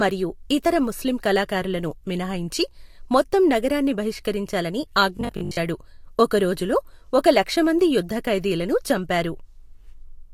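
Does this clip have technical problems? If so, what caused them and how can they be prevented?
Yes. From 5.17 to 5.57 s, right after "మినహాయించి మొత్తం నగరాన్ని బహిష్కరించాలని", the speech turns into a rigid, metallic buzz at 50 Hz, robotic sound from repeated short buffers. The likely cause is audio arriving too seldom, so a 20 ms chunk is replayed to fill the gaps and about half the material is skipped. A spectrogram shows evenly spaced horizontal lines at multiples of 50 Hz. The waveform shows identical 20 ms segments repeating. Larger jitter buffers and a steadier network or CPU supply would prevent it.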